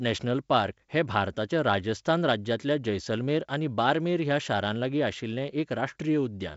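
No technical faults are audible.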